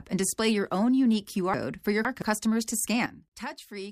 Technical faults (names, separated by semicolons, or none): chunks out of order; sudden gain jump